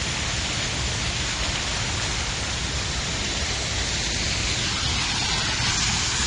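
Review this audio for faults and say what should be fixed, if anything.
The whole clip sounds dull and smeared, with plainly audible damage and nothing above 9.7 kHz. This is likely AAC compression. Too few bits force the encoder to lower its cut-off and coarsen the spectrum, which fits AAC-LC at roughly 32 kbps. To prevent it, encode at a higher bitrate or keep a lossless master.

At 1.43 s there is a block of digital silence lasting 1.45 ms. The sound drops straight to zero and returns with no fade, so it is heard as a click. The length fits a 64-sample block that was not filled in time. To prevent it, give the audio thread larger buffers or more processing headroom so every block is written before output.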